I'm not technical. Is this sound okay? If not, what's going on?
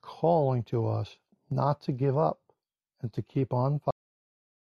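No. A cut-off end at 3.91 s: the recording's last stretch was never saved, so the speech stops abruptly mid-sound and falls straight into dead silence.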